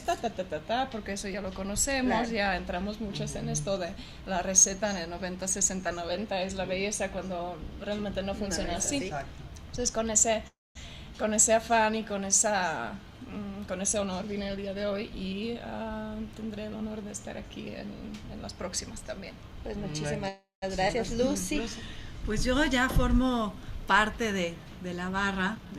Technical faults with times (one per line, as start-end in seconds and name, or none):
10.47-10.77 call audio freeze
13.94-15.90 jitter buffer speed-up
20.28-20.64 call audio freeze
20.88-20.91 skip ahead
25.38-25.77 jitter buffer speed-up